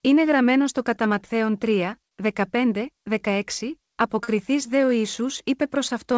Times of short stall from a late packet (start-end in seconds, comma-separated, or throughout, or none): 2.08-2.17, 4.24-4.28